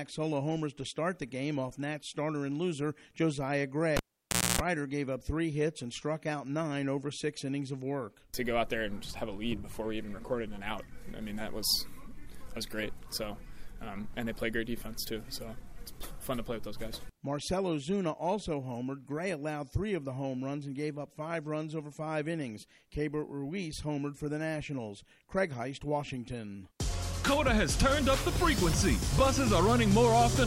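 At 3.97 s a cable is pulled and plugged in. A pop starts about 596 ms of near silence. Within it, 276 ms of 60 Hz mains buzz comes from the tip touching. A second pop ends it at 4.61 s.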